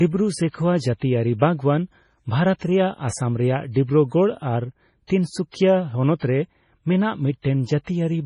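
Throughout, likely heavy MP3 compression at a starved bitrate removes everything above 10.5 kHz, leaving the speech dull, watery and swirly.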